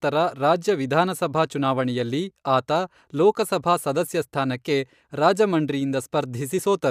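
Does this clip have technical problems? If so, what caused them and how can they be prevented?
No, this speech clip has no technical problems. There is nothing here that needs preventing.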